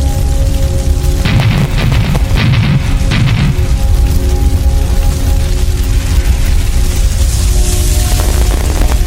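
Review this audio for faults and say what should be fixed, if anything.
Processor overload crackle at 1.20–2.44 s and 8.12–8.96 s: dozens of sub-millisecond buffers miss their deadline, each dropping to silence, producing gritty crackle. Fix it by using a larger buffer size or reducing processing load.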